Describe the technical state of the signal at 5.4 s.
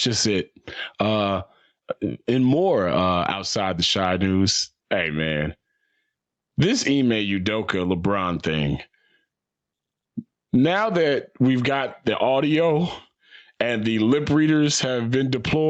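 At 5.4 s the audio is inside gain pumping that runs through the whole clip. The level swells and ducks by around 15 dB. The likely cause is input gain set far too high, with a fast limiter clamping every peak. On the waveform, loud and soft parts sit close in level; the spectrogram is empty above 8 kHz.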